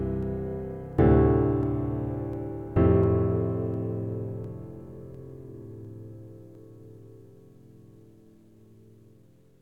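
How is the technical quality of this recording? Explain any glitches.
The recording has a recurring glitch: a regular click running through the music from 0.23 s to 9.36 s, most likely clock drift buffer slips. Two devices in the chain appear to run on separate clocks that disagree by something like 500 ppm, so the buffer between them drifts until a small block of a dozen or more samples is dropped or repeated. That correction happens every 0.70 s, about fifteen times in all, and each one is heard as a short tick.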